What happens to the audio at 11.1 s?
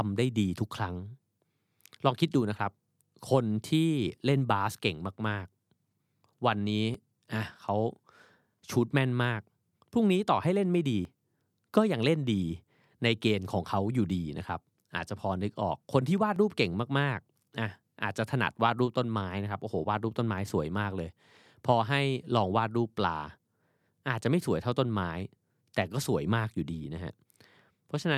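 At 11.05 s a sudden jump, likely a dropped buffer (overrun), skips about 30 ms of unread audio with the edges spliced, showing as a waveform step and vertical spectrogram line.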